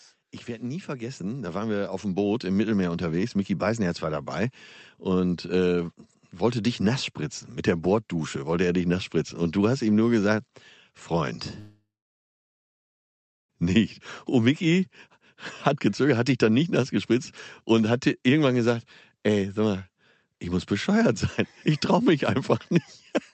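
From 0.45 to 4.35 s an automatic gain rising fault is audible: the gain control judged the input too quiet and ramped its gain up by about 12 dB over nearly four seconds, so the speech and the background noise swell together rather than the voice alone getting louder.

At 11.59 s the incoming audio stops. The last sound is stretched into a short fading buzz, and then about 1.6 s of silence follows until 13.51 s. Speech resumes with roughly 1.9 s missing. This is likely a long network dropout, with the receiver's concealment filling the gap.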